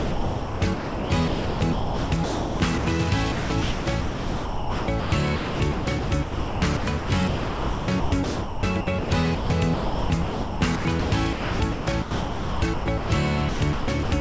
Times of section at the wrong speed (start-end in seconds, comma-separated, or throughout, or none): none